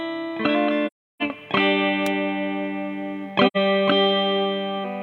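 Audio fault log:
0.86–1.22 s and 3.47–3.57 s, AAC frame loss with muting: the sound drops into silence for about 0.36 s and then about 0.1 s. Blocks of coded audio never reached the decoder, so it filled those stretches with a zeroed spectrum. The overlapping transform windows ease the sound down into each gap and back up out of it, giving soft-edged holes. Both gaps are whole multiples of roughly 43 ms, which fits 1024-sample AAC frames at a 24 kHz rate.
2.06 s, electrical switching spike: a sharp snap sits on top of the sound for a few milliseconds, then the sound continues unchanged. The brief, hard-edged burst is likely a nearby switch, relay or static discharge arcing and coupling a short transient into the audio line. Because it is added to the audio rather than replacing any of it, nothing drops out around the snap.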